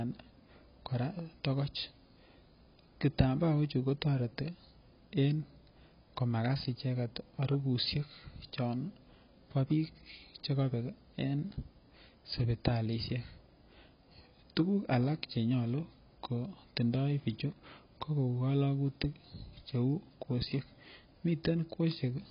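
From start to end, nothing sounds above about 5.1 kHz. Sibilants fizz and warble. This is likely heavy AAC compression at a very low bitrate.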